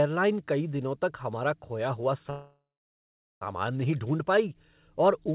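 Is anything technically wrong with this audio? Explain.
Yes. After "तक हमारा खोया हुआ", the speech stalls from 2.3 to 3.43 s in a call audio freeze, likely from packets held up in transit until the jitter buffer ran empty. The last sound is stretched into a fading buzz or hiss, followed by about 0.8 s of silence. Speech then resumes where it stopped, so nothing is lost, but it arrives 1.1 s late. On a spectrogram this appears as a smeared, decaying band followed by a blank gap, all below the 4 kHz ceiling of the G.711 call path. The waveform shows a tapering tail and then a flat line.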